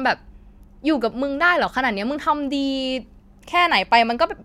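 No technical faults are audible anywhere in the speech.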